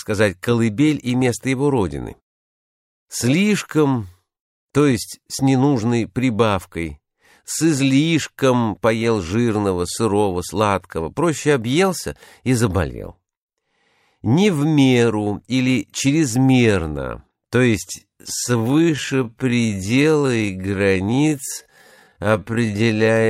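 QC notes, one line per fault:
17.94–23.29 s, time-stretched section: pace abruptly drops to about 0.56x, dragging yet pitch unchanged, unlike a slowdown; likely software stretching by repeating short pieces.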